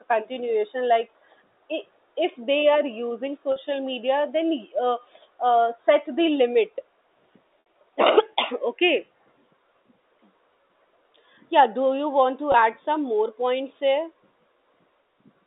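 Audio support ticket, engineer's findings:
Packet loss with pitch repetition, three dropouts: 3.52–3.56 s after "are using" (40 ms), 7.60–7.66 s (60 ms), 12.52–12.54 s between "do you want to" and "add some more points" (20 ms). Brief held, buzzy tone. Probable component: receiver-side concealment looping the last pitch period and fading it; gap lengths fit 20 ms packet framing. Waveform shows identical repeated cycles with decaying envelope. Spectrogram shows flat, frozen harmonic bands, then a cross-fade back. Line band of G.711 telephone coding (300 Hz–3.7 kHz) also audible.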